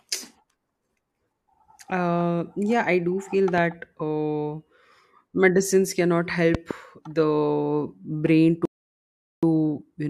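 At 3.58 to 3.60 s, just after "yeah I do feel", a single loud pop cuts in. At 6.55 to 6.73 s, after "medicines cannot", two pops follow close together. Each peaks roughly ten decibels above the speech. The speech carries on underneath. The likely cause is a sudden voltage step, as from a switch or static.

From 8.65 to 9.43 s there is a rebuffering stall. The player ran out of downloaded audio and waited. The speech drops to silence for about 0.77 s. It then resumes exactly where it stopped. Nothing is lost, but time is added.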